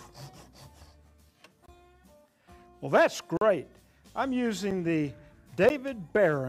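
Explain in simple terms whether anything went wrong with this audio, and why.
The sound drops out four times in blocks of digital silence, at 1.66–1.68 s, 3.37–3.41 s, 4.71 s and 5.69 s. The program likely didn't fill its buffer in time, so the audio cuts to silence and snaps back, leaving a click or short hole.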